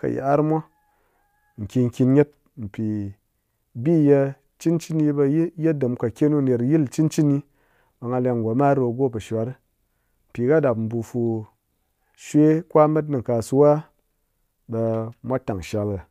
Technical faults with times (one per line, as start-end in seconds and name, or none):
none